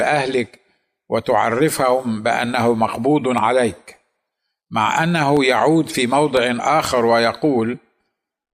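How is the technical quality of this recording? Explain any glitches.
The recording has periodic USB or driver dropouts. From 3.38 s to 8.36 s, a blocked driver briefly drops audio, leaving about seven half-millisecond silent gaps heard as ticks exactly 1.0 s apart. The strict spacing distinguishes them from random clicks.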